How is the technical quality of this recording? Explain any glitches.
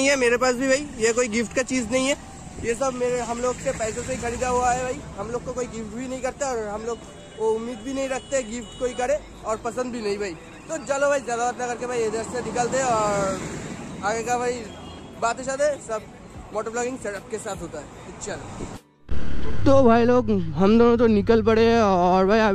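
No glitches can be heard; the signal stays continuous and stable throughout, with no dropouts, distortion or timing disturbances to explain.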